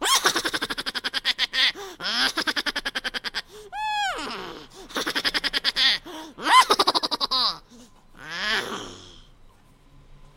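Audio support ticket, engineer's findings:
Audio read two samples at a time (double speed), entire clip: runs 2x fast, pitched up an octave. Probable component: reader/decoder format setup. Mechanism: sample pairs consumed as single frames, likely a mono/stereo or sample-width mismatch.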